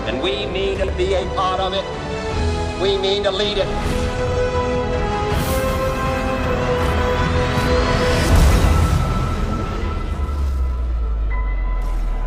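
Two brief jumbled moments, at 0.74 to 0.88 s and 4.27 to 4.37 s, come from chunks out of order. Each chunk is about 46 ms. One chunk played two chunk-lengths late in the first event and one chunk-length late in the second. No audio is lost, but the sequence is shuffled, with three hard joins around each misplaced chunk.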